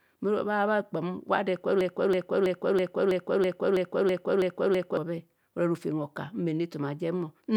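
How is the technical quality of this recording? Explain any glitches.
The recording has one serious glitch: a broken-record loop from 1.81 s to 4.97 s, right after "ado ekubho". A fragment of about 0.33 s repeats exactly, back to back, ten times, producing a stuttering, mechanical cycle in place of continuing speech. The likely cause is a stall in the player, encoder or stream, which kept resending the last buffered fragment instead of new audio. Whatever should have been heard during those three seconds is missing.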